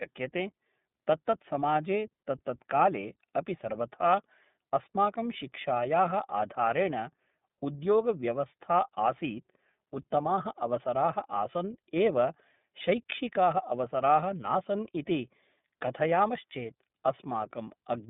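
From start to finish, the speech carries iLBC codec damage. The band runs only from about 150 Hz to 3.6 kHz, so it sounds thin and muffled. Each 30 ms frame is coded on its own, which fits a 13.33 kbps stream. The result is plainly rough and synthetic.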